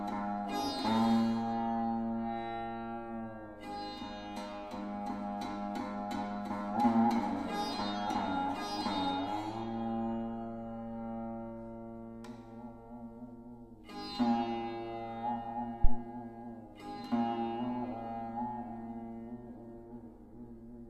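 At 15.84 s a deep thump breaks in and is gone by 16.00 s: a phantom power thump, produced when the supply on a live input is switched and the voltage step passes through the coupling capacitors. It peaks at about -10 dBFS and dies away in roughly 35 ms. On the waveform it shows as a single large low-frequency swing that settles quickly; the spectrogram shows a brief bright band concentrated at the very bottom.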